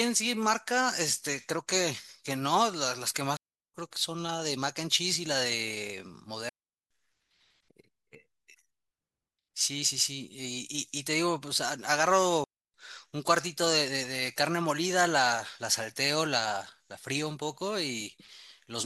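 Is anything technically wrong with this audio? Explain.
Yes. The speech suffers three digital wireless dropouts, at 3.37 to 3.74 s, 6.49 to 6.91 s and 12.44 to 12.74 s. Each time the wireless receiver lost too much data and muted itself for roughly 300 to 410 ms, leaving a clean, near-silent hole with no noise burst on either side.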